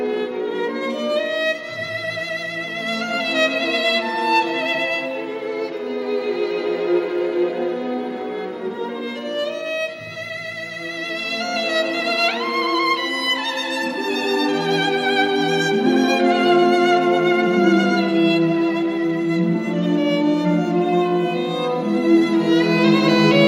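No technical faults can be heard anywhere in this recording. Nothing in the sound points to a dropout, a break or any other fault along the way.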